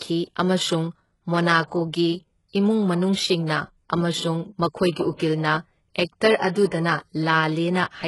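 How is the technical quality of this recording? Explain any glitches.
Heavily coded, with two faults. Throughout, the treble sounds gritty and lispy on s sounds, likely from HE-AAC compression at a very low bitrate around 12 kbps, copying lower bands upward. At 6.37 to 6.40 s, an attack is preceded by about 34 ms of hiss and sounds smeared: pre-echo, where block-wide quantisation noise leaks ahead of the transient.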